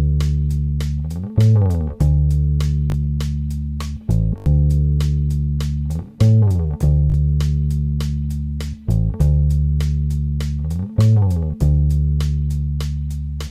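Playback three times ran short of fresh data and replayed its last buffer, a repeated buffer fault that fits a 20 ms block. At 2.9, 4.38 and 7.1 s the sound stutters with hard joins, dropping a few tens of milliseconds each time.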